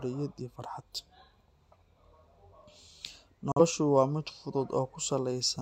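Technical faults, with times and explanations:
3.52 to 3.61 s, digital broadcast dropout: the receiver stopped getting a clean signal, or a frame failed its checksum, so it muted rather than play corrupted data. The speech fades out over about 3 ms, leaving a hole that sounds like a sudden gap. The missing stretch of roughly 43 ms fits a single lost frame. Whatever was sent during that moment is gone, and the speech resumes mid-stream once good frames arrive again.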